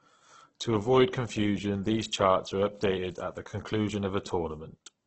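From start to finish, the speech is rough and grainy, with a hissy, textured edge and no content above 8.2 kHz, consistent with heavy damage from what is likely Opus compression. The graininess points to the music mode at a very low bitrate, around 12 kbps, filling starved bands with folded or noisy energy. On a spectrogram the upper bands look speckled and smeared rather than holed, ending in a flat ceiling at 8.2 kHz.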